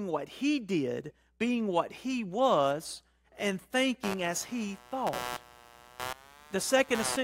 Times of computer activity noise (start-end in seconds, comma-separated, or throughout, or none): 4.03-7.23